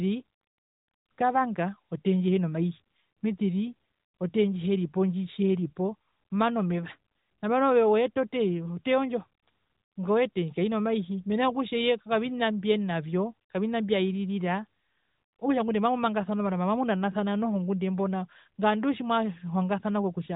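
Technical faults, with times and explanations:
No technical faults can be heard, so there are no times or explanations to give.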